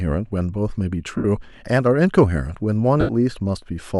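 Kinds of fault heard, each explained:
Lost LE Audio frames: Parts of the Bluetooth LE Audio stream never reached the decoder, and the LC3 decoder filled each gap by reusing the last spectrum with random signs. The speech turns into a brief noisy smear at 1.17–1.25 s and again at 3.00–3.09 s. That concealment fades as the gap goes on. The gaps last about 68 ms and 83 ms, which fits runs of nine and eleven 7.5 ms frames.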